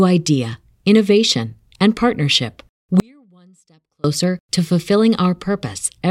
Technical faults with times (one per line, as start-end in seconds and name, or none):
3.00-4.04 audio dropout to a faint residue